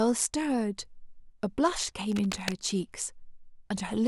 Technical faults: cable scratch noise

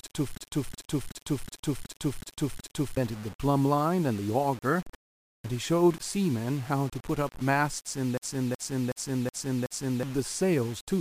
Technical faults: low bit depth without dither; system hang loop

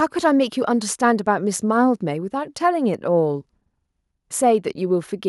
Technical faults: none

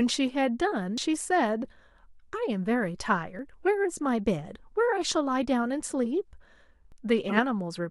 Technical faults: dropped buffer (overrun); corrupt frame decoded

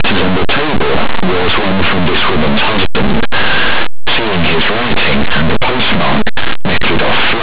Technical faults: linear audio read as companded

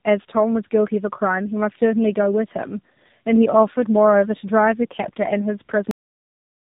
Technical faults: tandem speech coding; cut-off end

